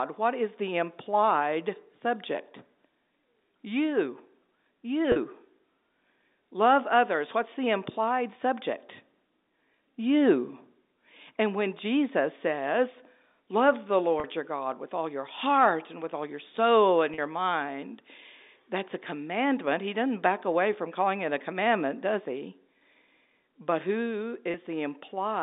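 At 5.12 s, 14.2 s and 17.14 s there's a brief patch of packet loss with pitch repetition, about 40 ms each, which fits a couple of dropped packets. The receiver bridges each hole by replaying the last pitch period, so you hear a quick buzzy, slightly held sound before normal speech resumes. A shorter 20 ms gap at 24.52 s does the same thing. All of it sits inside the narrow 250 Hz to 3.7 kHz telephone band.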